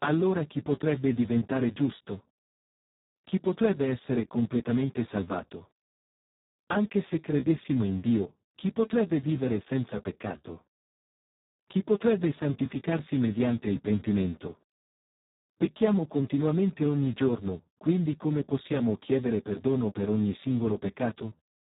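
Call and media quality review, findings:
Speech hoarse, buzzy and robotic throughout, no content above about 3.8 kHz. Speex codec at a low quality setting, sound pointing to roughly 4 kbps: too few bits for excitation in the CELP synthesis. Heavy codec damage.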